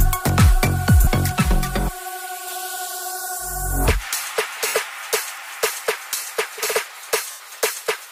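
At 1.04 s (30 ms), lost LE Audio frames make the decoder repeat the last spectrum with scrambled phase. The result is a brief noisy smear, seen as a blurred vertical band. From 1.32 to 2.47 s, channel delay (comb filtering) from a roughly 5 ms inter-channel lag sounds hollow and phasey, showing evenly spaced horizontal notch stripes starting near 100 Hz. Further frame losses at 4.67–4.74 s (70 ms) and 7.31–7.40 s (90 ms) smear and fade, with the waveform tapering toward silence.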